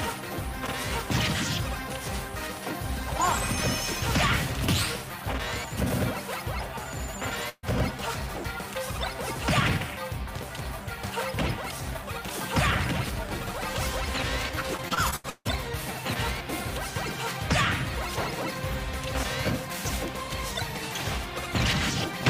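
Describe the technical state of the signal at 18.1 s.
At 18.1 s the signal is intact, with no dropout, clipping, glitch or other fault audible at that point.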